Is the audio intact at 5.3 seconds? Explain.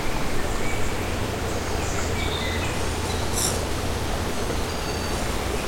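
No. Periodic clock jitter runs from 2.73 s to the end at 5.68 s, so 5.3 s is affected. The converter's clock is wobbled at around 2 kHz, putting sidebands at that spacing around every component, strongest on high content, and giving a rough, metallic edge.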